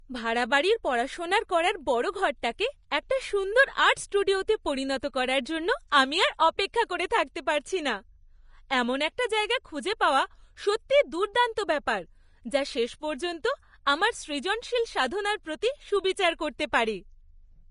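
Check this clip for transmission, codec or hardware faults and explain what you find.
Two codec faults stand out in this speech clip. First, the whole thing sounds hissy and grainy, and nothing comes through above 10.6 kHz. That's likely Vorbis compression at a low bitrate, something like 32 kbps. The encoder cuts the treble and quantises what's left so coarsely that fine detail turns into noise.

Second, there's pre-echo at 6.73, 7.10 and 16.72 s. A short hiss of 10 to 14 ms comes in just ahead of sharp attacks, so they sound soft and smeared. The coarse quantisation noise spreads over the whole transform block, including the quiet moment before each onset.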